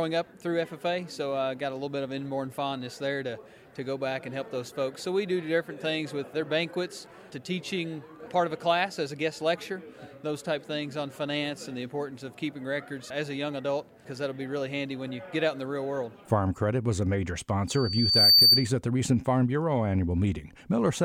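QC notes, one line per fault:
17.68–18.70 s, loudspeaker feedback squeal: a 4.6 kHz tone swells over roughly 0.7 s to about 10 dB above the sound as mic-to-speaker loop gain exceeds unity.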